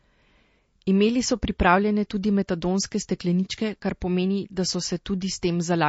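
From start to finish the speech carries plainly audible MP3 compression damage, likely from encoding at a low bitrate around 32 kbps. Nothing survives above 7.7 kHz, so the audio turns dull; s sounds pick up metallic chirps and the sound turns watery, with a swirling, chirpy texture as weak frequency lines flicker on and off. A spectrogram shows a hard horizontal ceiling at 7.7 kHz and speckled, patchy gaps below it that change from frame to frame.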